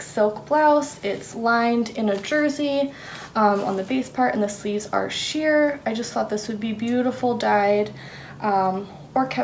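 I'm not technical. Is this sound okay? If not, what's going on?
Yes, nothing wrong can be heard in this sound.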